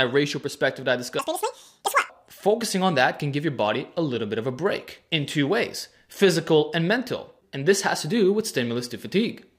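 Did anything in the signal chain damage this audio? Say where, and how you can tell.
Yes. From 1.19 s to 2.10 s the audio was read two samples at a time (double speed), a sample-format or buffer-interpretation error where pairs of samples were consumed as single frames. That stretch plays at 2x speed and jumps up 12 semitones, a full octave. On a spectrogram every harmonic in that window sits at twice its frequency. The waveform looks horizontally compressed.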